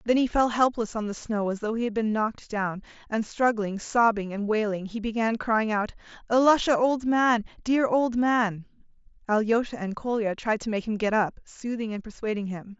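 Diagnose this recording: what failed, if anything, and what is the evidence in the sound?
Nothing in the recording points to a failure at any stage. The speech carries the signature of a Bluetooth mSBC headset link working as designed, with the top end stopping around 8 kHz and only light coding texture on the louder passages.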